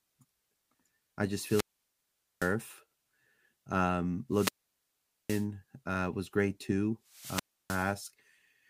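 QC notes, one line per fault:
1.41–2.56 s, wireless microphone squelch dropout: hiss swells, then about 0.81 s of near silence as the receiver's squelch mutes a fading FM radio signal.
4.30–5.47 s, wireless microphone squelch dropout: static rises into a roughly 0.81 s hole before the speech returns with "uh was great too", as the squelch gate closes.
7.09–7.99 s, wireless microphone squelch dropout: shortly after "uh was great too", a burst of hiss and a 0.31 s mute as the signal falls below the squelch threshold.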